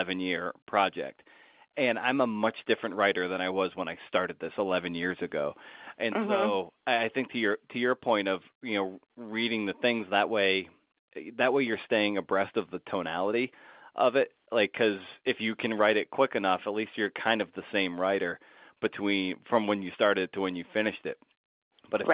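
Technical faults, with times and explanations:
Nothing here stands out as a technical fault; it's simply speech carried over an ordinary telephone-band line.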